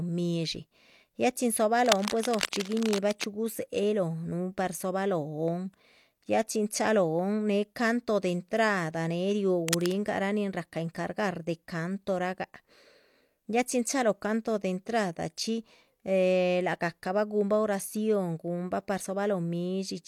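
A speech recording with cable scratch noise in two places: a longer stretch from 1.86 to 3.24 s and a brief one from 9.68 to 9.92 s. Both are dense, irregular bursts of scratching and rustling sitting only a little below the level of the speech. The likely cause is a worn cable or connector being moved, so its contact resistance jumps around rapidly and injects crackling noise into the signal path.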